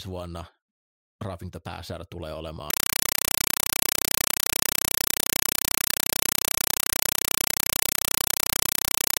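Compressed stream played as audio from 2.70 s, right after "pääsäädä tulee", to the end: the speech gives way to loud, chattering static, 5.33 ms noise bursts repeating 31.25 times a second, which points to an undecoded 256 kbps AC-3 stream being treated as plain samples.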